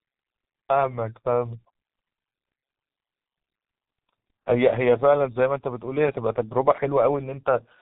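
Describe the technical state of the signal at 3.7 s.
G.723.1 codec damage is present at 3.7 s, as it is across the whole clip. The speech is carried in coarse 30 ms frames at a rate that fits roughly 6 kbit/s. Nothing passes above 3.8 kHz, leaving the voice muffled and hoarse with smeared consonants.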